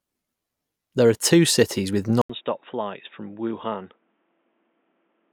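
At 2.2 s the speech drops out for 80 ms, then returns quieter with nothing above 3.7 kHz and a new noise floor, likely an input switched to a poorer device rather than simple filtering.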